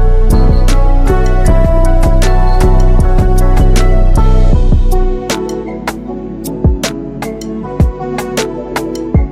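Mains hum runs through the whole recording, a steady low tone at 50 Hz sitting roughly 25 dB under the audio. It comes from a ground loop or a nearby transformer letting the power-line frequency couple into the signal path, so it persists regardless of what the sound is doing.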